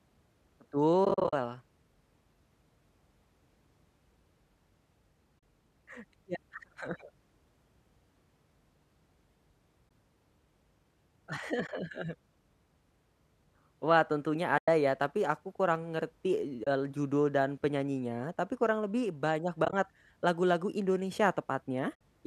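Speech, carried over what is likely low-delay AAC compression, where AAC frame loss with muting occurs: frames dropped and the decoder zeroed them, so the sound fades to soft-edged silent holes. This happens at 1.05–1.33 s (scattered gaps, runs of about 40 ms at most), 5.39–5.43 s, 9.89–9.91 s, 11.67–11.69 s, 14.58–14.68 s just before "ya tapi aku kurang", 16.64–16.67 s between "tapi aku kurang ngerti" and "judul dan penyanyinya tapi", 19.65–19.73 s after "tapi kurang lebih banyak" (broken into short runs), and 21.95–22.01 s.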